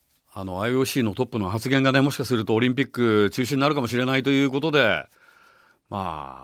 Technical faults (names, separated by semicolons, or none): none